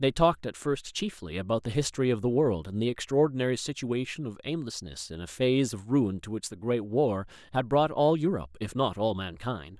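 Nothing in this speech recording stands out as a technical fault, so there's no problem to point to anywhere along the way.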